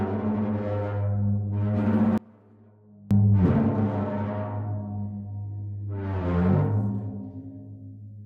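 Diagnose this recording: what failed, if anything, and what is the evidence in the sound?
From 2.18 s to 3.11 s, the sound drops by about 27 dB and then returns at its earlier level. The whole sound falls together, not one band or source. The likely cause is one channel inverted, at the analogue wiring or mixing stage, for that stretch. When two matched channels are summed to mono and one has reversed polarity, their shared content cancels. Only the small difference between the channels survives, which accounts for the residue about 27 dB down.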